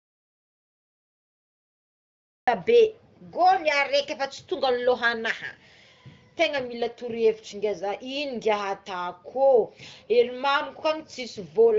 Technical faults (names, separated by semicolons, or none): audio dropout to silence